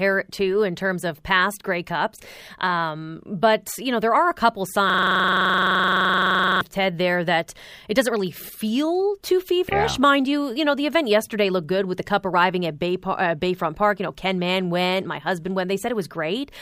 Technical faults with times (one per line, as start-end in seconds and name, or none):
4.90-6.61 system hang loop